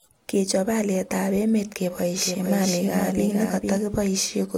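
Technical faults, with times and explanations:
2.17–3.77 s, doubled audio track: a second, likely slower capture path or misaligned edit mixes the same speech in again about half a second late and a few dB quieter. Each sound repeats as a dry, full-band echo without room decay, cutting in and out abruptly.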